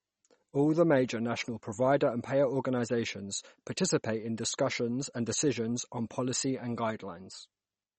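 From start to end the speech has no content above 8.4 kHz and a plainly audible watery, swirling texture on sibilants. This is likely MP3 compression at a low bitrate, fitting roughly 32 kbps, where the encoder drops treble and switches weak frequency lines on and off.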